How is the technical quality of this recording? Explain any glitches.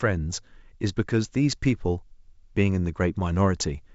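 No glitches or technical faults can be heard in the recording. It carries the sound of G.722 wideband telephone coding at 64 kbit/s, with the band ending at about 7.7 kHz and only faint traces of the codec at most.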